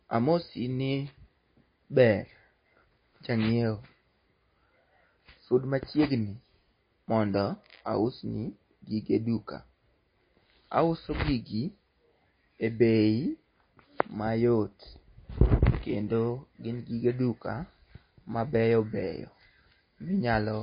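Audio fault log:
Throughout: MP3 compression, likely the cause of the damage heard across this speech. Nothing reaches above 5 kHz, a hard treble cut-off the encoder imposes when bits are scarce, so s sounds lose their hiss and the sound turns dull. The plainly audible watery, swirling texture comes from weak frequency lines being zeroed and then restored from frame to frame, while attacks smear, all of which fits a low bitrate of around 24 kbps.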